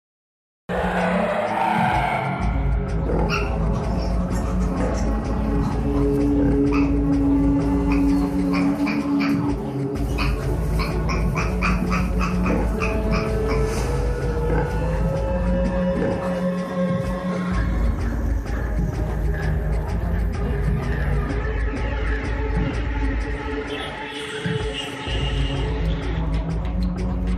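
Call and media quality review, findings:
Cut-off start: digital silence 0–0.69 s, then audio enters mid-sound at 0.69 s, no attack or fade. Capture or stream start began late. Unlike a dropout, nothing precedes the gap. Unlike a fade-in, onset is instantaneous.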